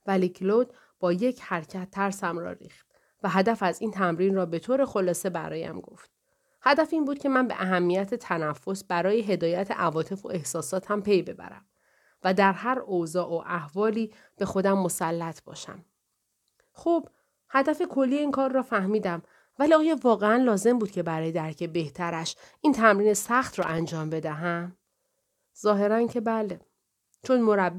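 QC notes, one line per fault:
23.62 to 23.80 s, loose connector crackle: a short, ragged burst of scratching and crackle lasting about 0.18 s cuts across the speech, irregular rather than a steady tone. A worn or dirty contact somewhere in the cable or jack path was moving and rapidly losing and regaining connection, so the signal was chopped on and off many times in that instant. Any DC sitting on the line jumps at each break, which adds pops.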